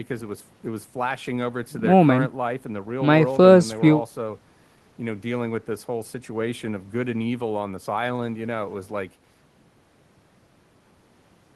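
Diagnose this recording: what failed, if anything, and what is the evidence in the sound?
Nothing failed here; I listened for trouble in the signal chain and came up empty, so there's no stage to point a finger at.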